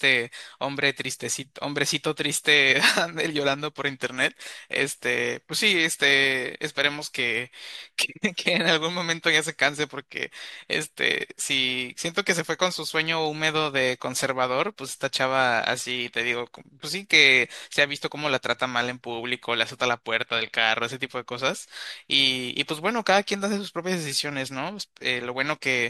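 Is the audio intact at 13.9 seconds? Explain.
Yes, the audio is intact at 13.9 seconds, with no fault audible at that moment.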